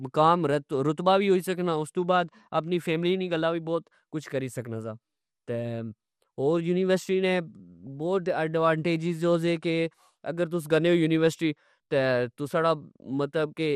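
A speech recording that sounds dull and gurgling throughout, with a coarse, granular edge; this is MP2 compression, likely from Layer II coding at a bitrate around 80 kbps, starving upper sub-bands. At 7.87 s, between "ہور یونیورسٹی نے" and "بوت ایڈوانٹجیز ہو سے", a few brief watery blips come through. This is DAB burbling, where a few bit errors slip past error correction and corrupt what sounds like a single audio frame.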